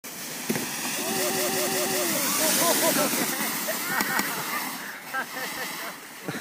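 Repeated buffer faults occur at 1.30 to 2.04 s, then 4.09 to 4.27 s and 5.57 to 5.76 s. Fresh audio arrived late, so playback looped the last block of about 186 ms, which fits an 8192-sample buffer. It plays four extra times in the first stretch and once in each later one, a rhythmic stutter with hard joins. On a spectrogram, identical blocks tile side by side, split by sharp vertical seams. The waveform shows matching segments.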